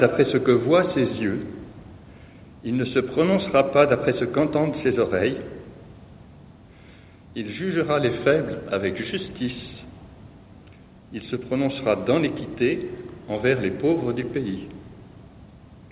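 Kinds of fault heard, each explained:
Nothing here counts as a fault: the sound comes over an ordinary call connection that fits G.711 mu-law, so having nothing above 4 kHz is just what that line normally does.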